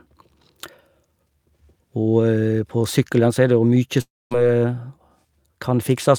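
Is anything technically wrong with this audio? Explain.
Yes. From 4.01 to 4.33 s the speech breaks off. The last sound smears into a short buzzing tail that fades, then about 230 ms of near silence follows before the speech picks up again with roughly 300 ms of it simply gone. This is most likely a long network dropout: packets stopped arriving, the receiver stretched the final fragment to cover the gap, gave up as it decayed, and resumed later without the lost audio.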